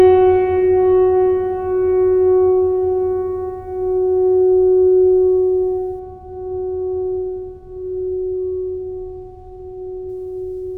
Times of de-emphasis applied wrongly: 5.99-10.09

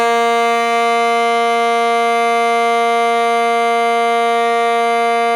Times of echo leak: none

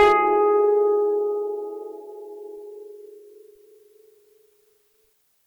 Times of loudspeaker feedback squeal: none

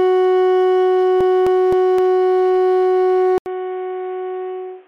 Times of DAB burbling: none

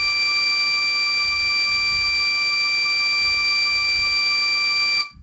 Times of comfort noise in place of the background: none

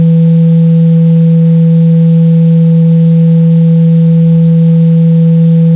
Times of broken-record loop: none

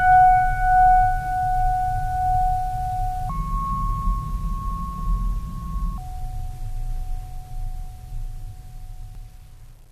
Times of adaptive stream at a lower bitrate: none

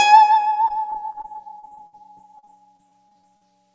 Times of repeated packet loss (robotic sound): 0.68-3.43

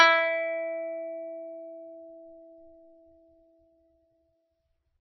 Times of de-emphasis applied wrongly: none

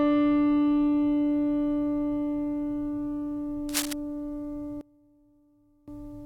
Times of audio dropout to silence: none

